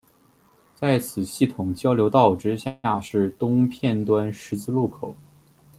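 From 2.67 to 3.12 s, repeated packet loss makes the speech choppy and robotic. Four gaps are patched by stretching earlier sound. The longest gap lasts 165 ms.

From 3.42 s to the end, a call bitrate drop makes the speech rough and muffled. This fits the encoder falling from about 40 to 18 kbps.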